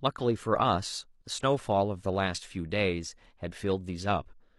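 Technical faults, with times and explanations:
4.18 to 4.25 s, damaged data in a compressed stream: a short glitch cuts into the speech for about 66 ms. Some bytes of the compressed stream were corrupted at this point. The decoder read garbage as audio frames and lost its place in the stream. It then skipped forward until it found the next valid frame header. The misread data makes the glitch.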